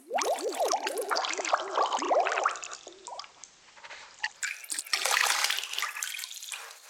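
At 1.00 s the sound shifts over roughly a quarter of a second: the level shifts by about 2 dB, and a steady hiss rises, sitting roughly 30 dB beneath the signal. It stays this way until 4.56 s, then crossfades back. This is digital radio blending to analogue: the receiver lost its digital stream and faded across to the station's FM broadcast, returning to digital once reception recovered.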